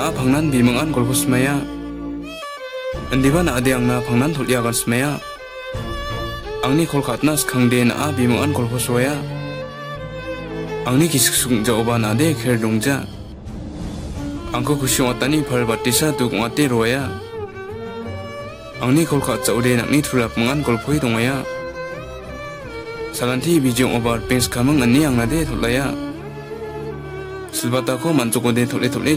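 No technical faults can be heard anywhere in the clip. There are no dropouts, glitches or other disturbances at any point.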